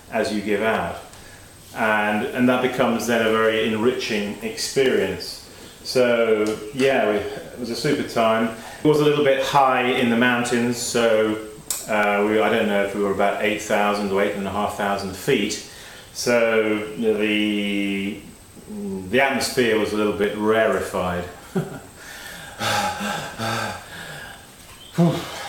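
Clock drift buffer slips, 0.75 s to 25.36 s: a click every 1.02 s, likely two mismatched device clocks, around 300 ppm apart, dropping or repeating sample blocks.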